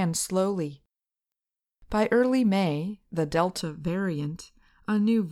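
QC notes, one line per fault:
3.61 to 5.31 s, channel delay (comb filtering): from 3.61 s to the end, the speech turns hollow and phasey. One channel arrives a fraction of a millisecond late, under 1 ms, and when the two channels are folded to mono, the shared content cancels at evenly spaced frequencies. That carves fixed notches into the spectrum, the first at roughly 700 Hz, with further notches at regular intervals above it.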